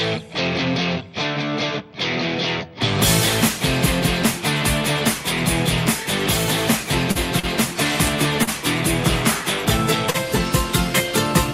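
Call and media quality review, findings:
Short stall from a late packet at 7.11, 7.39, 8.43, 10.10 s: sound held about 40 ms each, slight buzz or dip, nothing lost. Jitter buffer underrun; receiver stretches last audio until packet lands, adding about 40 ms delay. Spectrogram: frozen horizontal band; waveform: repeated cycles.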